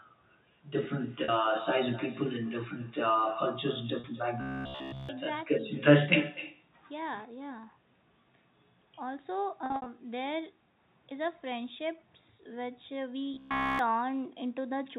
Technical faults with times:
0.00-14.98 echo with no canceller
1.24-1.28 packet loss with pitch repetition
4.00-4.04 packet loss with pitch repetition
4.41-5.09 robotic sound from repeated short buffers
9.66-9.86 packet loss with pitch repetition
13.34-13.79 robotic sound from repeated short buffers

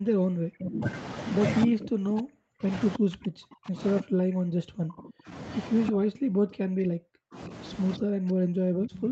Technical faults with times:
0.00-0.90 speech suppressed in double talk
1.65-2.69 speech suppressed in double talk
2.98-5.34 speech suppressed in double talk
5.86-5.92 echo leak
5.91-7.51 speech suppressed in double talk
7.97-9.12 speech suppressed in double talk

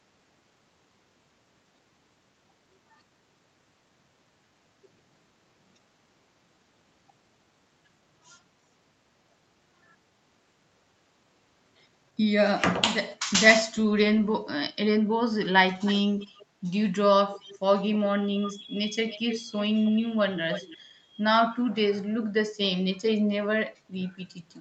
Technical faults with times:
15.85-16.46 echo leak
17.30-17.59 echo leak
18.45-18.60 echo leak
19.08-19.91 echo leak
20.51-20.78 echo leak

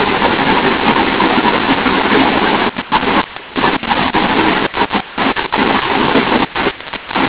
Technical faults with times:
0.00-7.29 mu-law and A-law mixed up

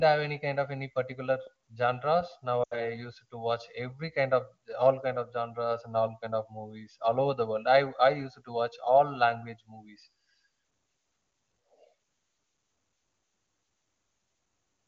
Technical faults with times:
0.00-14.87 channel delay (comb filtering)
2.63-2.87 lost AMR speech frames

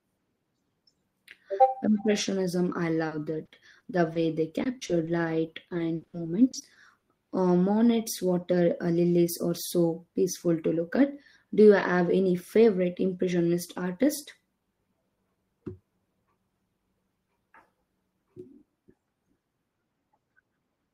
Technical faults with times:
3.07-4.17 repeated packet loss (robotic sound)
4.63-5.09 repeated packet loss (robotic sound)
5.45-6.15 repeated packet loss (robotic sound)
6.51-7.03 repeated packet loss (robotic sound)

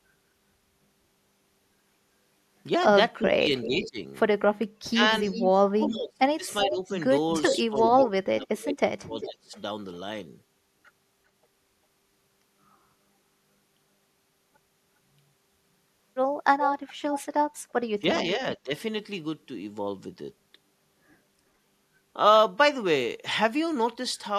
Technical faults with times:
3.22-3.98 speech suppressed in double talk
3.27-3.89 echo leak
4.90-9.58 speech suppressed in double talk
5.23-5.48 echo leak
6.61-7.84 echo leak
9.21-9.32 echo leak
16.65-17.24 echo leak
18.01-18.73 speech suppressed in double talk

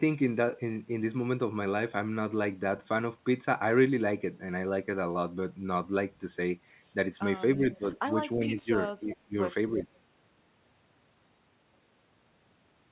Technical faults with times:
7.56-7.84 speech suppressed in double talk
8.34-8.70 speech suppressed in double talk
9.01-9.37 speech suppressed in double talk
9.10-9.15 echo leak
9.73-9.88 speech suppressed in double talk

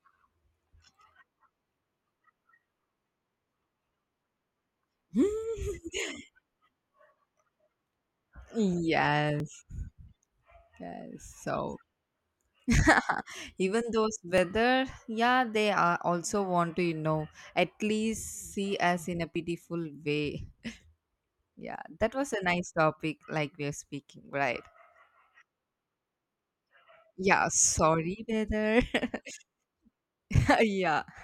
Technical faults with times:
9.40 audio missing between chunks
14.38 audio missing between chunks
19.36 audio missing between chunks
24.33 audio missing between chunks
29.31 audio missing between chunks

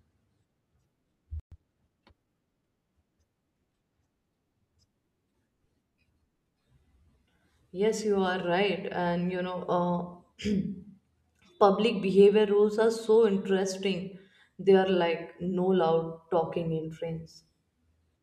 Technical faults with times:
1.40-1.52 playback stall
1.52-2.70 time-compressed catch-up

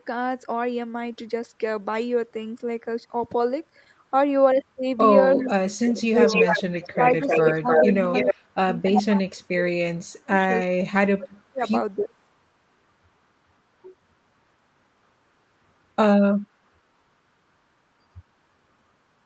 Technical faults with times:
5.35-5.49 echo leak
5.37-6.52 speech suppressed in double talk
6.00-6.95 echo leak
6.95-11.62 speech suppressed in double talk
7.27-8.34 echo leak
8.95-9.03 echo leak
11.98-12.11 speech suppressed in double talk
12.02-12.14 echo leak

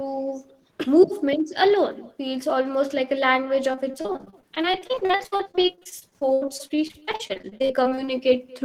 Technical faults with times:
0.00-8.65 echo with no canceller
3.71-8.09 repeated packet loss (robotic sound)

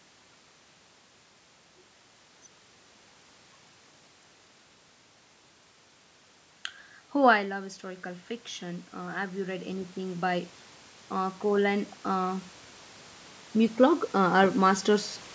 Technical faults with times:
7.46-10.56 automatic gain rising

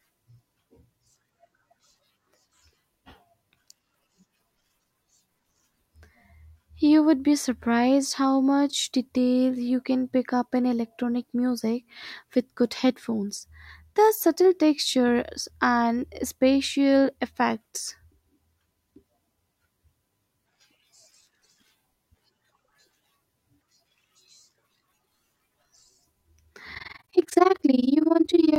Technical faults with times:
26.75-28.58 overlap-add ripple

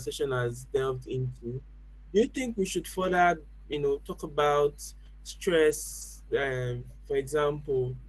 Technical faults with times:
0.00-8.08 mains hum
6.01-6.03 lost packet rebuilt from error correction

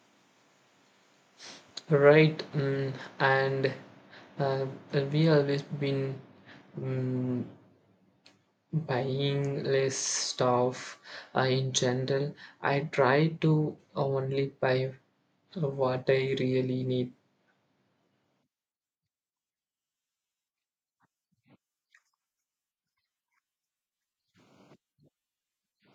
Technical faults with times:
none

